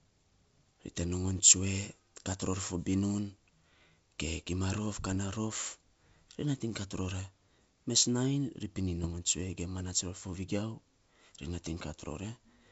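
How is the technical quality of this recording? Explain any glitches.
The audio is wideband speech, clear up to about 7 kHz with a faint hiss in the upper band, which fits G.722 wideband telephone coding in its full 64 kbit/s mode. It is damaged in two places by bit errors on an ADPCM link, from 5.05 to 5.15 s and from 9.04 to 9.15 s, the second coming just after "ri pinin". A few tenths of a percent of the bits arrived flipped. Each bad bit corrupts a sample and also throws off the decoder's step size and predictor, so the error keeps ringing for several milliseconds. Both bursts sound like rough pops with a brief change in level.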